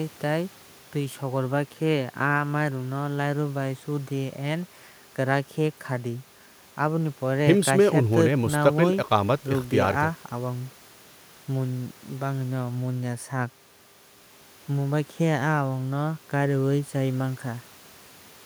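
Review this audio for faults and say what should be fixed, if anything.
Nothing stood out on listening to this speech recording, so there is nothing here that calls for a fix.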